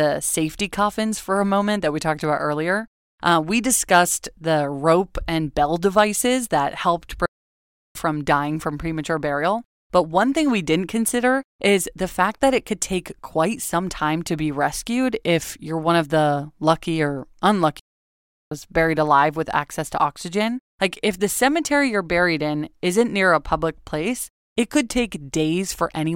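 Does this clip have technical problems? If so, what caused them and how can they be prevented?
Yes. Two playback stalls silence the speech mid-flow: 7.26–7.95 s after "bell devices that helped", and 17.79–18.52 s after "of the lucky or", each roughly 0.7 s, likely from the player running out of data. On a waveform and spectrogram both show as flat, empty gaps. Larger playback buffers and a player thread that isn't blocked by other work would prevent them.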